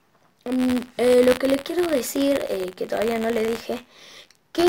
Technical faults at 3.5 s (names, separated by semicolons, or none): buffer tearing